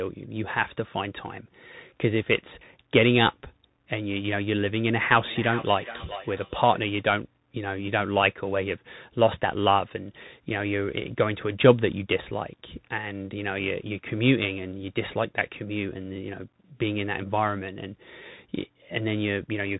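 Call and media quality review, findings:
Muffled, telephone-band sound throughout, nothing above 3.9 kHz, scratchy sibilants, granular hiss under the speech. Probable component: Bluetooth CVSD headset codec; the 1-bit adaptive-step coder can't track fast, bright transients, which fits a 64 kbit/s CVSD link.

Ringing, thinning repeats of speech from 5.12 to 6.84 s, about every 0.4 s, peaking about 12 dB below the speech. Probable component: feedback echo between two devices; one device replays the other's audio into that microphone, beyond its own echo canceller's reach.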